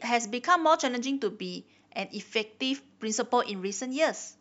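No technical faults are audible.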